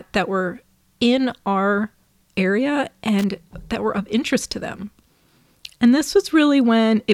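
At 3.19 s a burst of loose connector crackle cuts into the speech and lasts until 3.31 s. A worn or dirty contact is making and breaking rapidly. The signal is chopped into fragments. It sounds like a brief, irregular scratching crackle.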